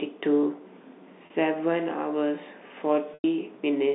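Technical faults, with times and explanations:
1.26 s and 3.14 to 3.24 s, packet loss with pitch repetition: a brief buzzy hold, then a longer fade to near silence, as the receiver repeats the last pitch period across gaps of 40 ms and 100 ms, which fits lost 20 ms packets.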